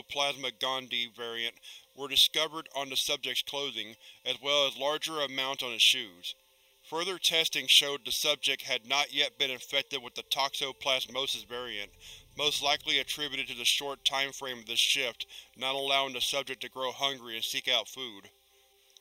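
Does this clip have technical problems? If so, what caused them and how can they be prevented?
Yes. Channel delay (comb filtering) runs throughout. One channel lags by roughly 0.3 ms, so the mono sum cancels at evenly spaced notches from about 1.5 kHz upward, which makes the sound hollow. Time-align the channels before summing to mono, and check mono compatibility at the mix stage.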